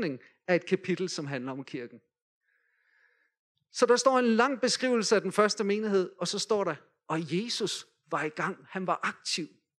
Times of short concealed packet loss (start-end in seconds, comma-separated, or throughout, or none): none